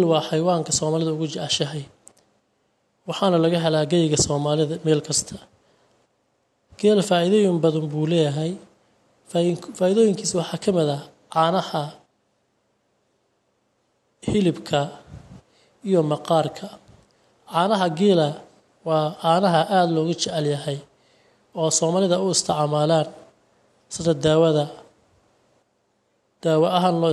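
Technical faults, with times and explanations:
0.14–27.06 s, clock slip clicks: faint, evenly spaced ticks about ten times a second, a couple of hundred in all, heard as a light rattle riding on the louder, sustained parts of the speech and vanishing in the pauses. Each tick is a single-sample jump in the waveform, likely from two devices running on unsynchronised clocks that disagree by something like 200 ppm, so a sample is dropped or repeated each time the drift totals one sample.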